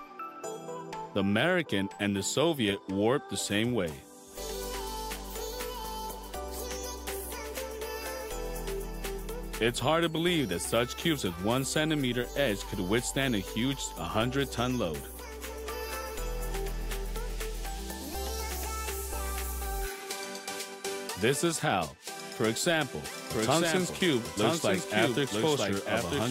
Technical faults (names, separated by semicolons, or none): doubled audio track